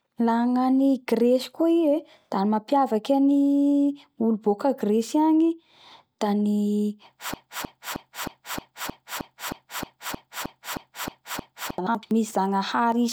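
From 7.34 s to 11.78 s, a 312 ms fragment of speech repeats back to back, a broken-record loop, likely from a stalled player or stream, losing the intended audio.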